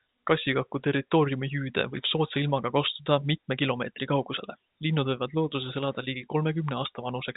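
The speech has no technical faults. It comes over a G.711 telephone coding path, so nothing above 4 kHz reaches the ear, and any quantisation noise is faint and rises and falls with the level of the sound.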